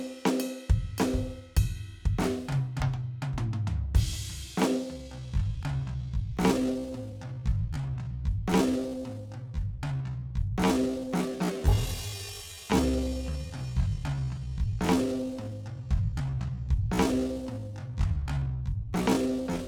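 From 4.92 s to the end, the music suddenly drags to about 0.57 times its pace while pitch holds steady. This is a time-stretched section, likely from software lengthening the audio by repeating short fragments to preserve pitch.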